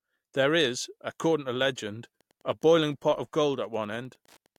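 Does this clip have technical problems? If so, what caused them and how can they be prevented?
Yes. From 2.15 s, just after "is according to legend", to the end at 4.58 s, there is Wi-Fi interference: a faint ticking, roughly 40 dB below the speech, repeating every 102.4 ms, about ten times a second. A nearby Wi-Fi radio's beacon transmissions are being picked up and rectified by the audio circuitry. Unlike mobile-phone interference, which produces a dense buzz near 217 Hz, this is a sparse, evenly spaced tick. Keeping routers and Wi-Fi devices away from microphones, preamps and cables, and using shielded, properly grounded connections, would prevent it.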